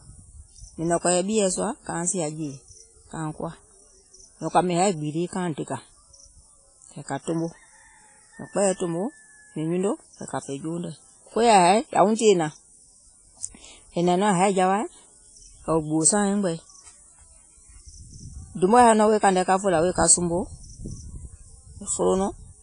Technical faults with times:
0.00-22.62 WMA compression

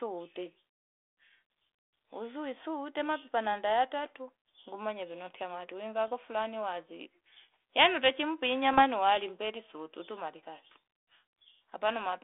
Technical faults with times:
3.70 bit errors on an ADPCM link
6.08 bit errors on an ADPCM link
8.71-8.83 bit errors on an ADPCM link

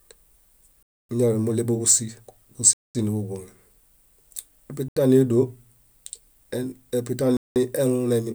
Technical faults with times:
0.83-1.09 Bluetooth stall
2.73-2.95 Bluetooth stall
4.88-4.96 Bluetooth stall
7.37-7.56 Bluetooth stall

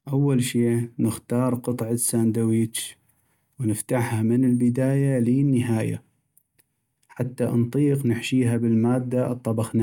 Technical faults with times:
none

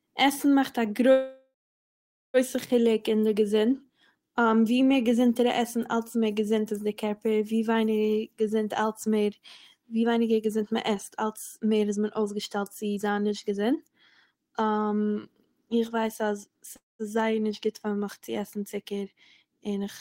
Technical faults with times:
1.11-2.37 call audio freeze
9.96-13.95 jitter buffer speed-up
16.76-17.02 call audio freeze

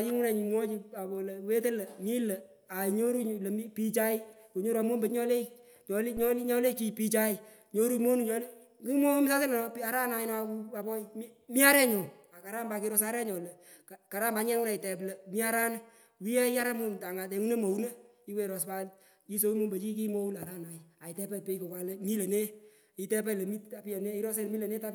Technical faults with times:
6.17-6.32 phantom power thump

